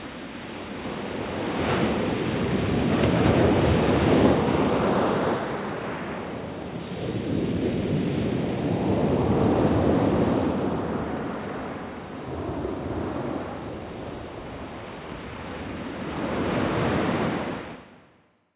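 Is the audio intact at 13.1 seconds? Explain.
Yes, at 13.1 s the sound plays through intact, with no dropout, click, distortion or other fault at that point.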